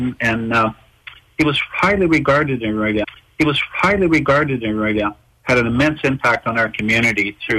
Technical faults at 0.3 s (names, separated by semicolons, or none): none